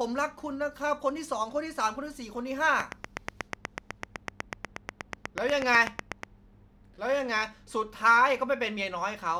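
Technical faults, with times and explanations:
2.80–6.24 s, train of clicks: A repeating pulse, likely from interference or a faulty connection, gets into the signal about 8.2 times per second at a steady pace. Around thirty closely matching sharp ticks sit well above the speech and carry through the pauses.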